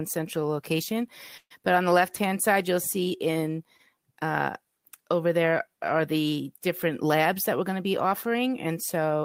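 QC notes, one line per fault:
1.37 to 1.52 s, call audio freeze: right after "central location" the sound stalls, a fading buzz or hiss then about 70 ms of silence, likely late packets emptying the jitter buffer; nothing lost, just delayed.
7.04 to 8.67 s, jitter buffer speed-up: after "there are the different" the speech runs about 7% fast at unchanged pitch, trimming roughly 150 ms to shrink an overfull buffer.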